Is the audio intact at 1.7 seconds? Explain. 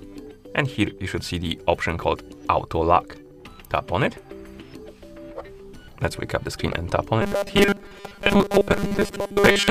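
Yes, the audio at 1.7 seconds is intact, with no dropout, click, distortion or other fault to be heard at that moment.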